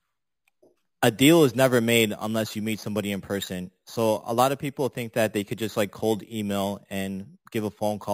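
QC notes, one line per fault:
throughout, imaging from sample-and-hold upsampling: samples repeated unfiltered mirror the speech spectrum into 5.5–11 kHz at about −17 dB, a metallic fizz fitting an 11 kHz original rate.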